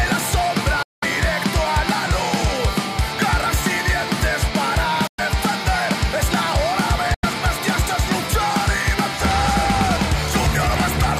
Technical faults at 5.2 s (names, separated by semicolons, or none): Bluetooth dropout